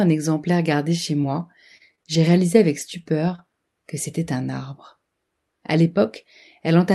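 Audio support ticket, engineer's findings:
Short concealed packet loss at 1.21–1.25 s, right after "exemplaire gardé chez". Brief smear where about 20 ms never arrived in time. The jitter buffer and decoder extended the preceding sound for roughly 21 ms, then crossfaded back into real audio.

Lost packet rebuilt from error correction at 1.23, 1.29, 1.35 and 1.39 s, each 20 ms, in the same passage after "exemplaire gardé chez". Rougher, grainier texture on each frame. Opus in-band FEC substituted the low-bitrate redundant copy carried in the following packet, so there is no audible gap.

Scattered short gaps from 1.77 to 3.40 s, ending before "que c'était un arbre". About five small hiccups and ticks, the longest roughly 30 ms. Cause is isolated lost or late packets, each patched by concealment, totalling around 100 ms, or about 7% of that stretch. Audible band tops out near 12 kHz, consistent with Opus at around 64 kbps.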